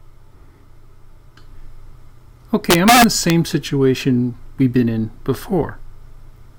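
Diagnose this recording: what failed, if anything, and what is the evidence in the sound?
Between 2.71 and 3.3 s the loudest peaks turn into violent, sharp cracks, far harsher than clipping. This is integer overflow at a gain or sample-format conversion stage: with about 4 dB of overdrive, peaks past full scale wrapped to the opposite sign instead of being limited.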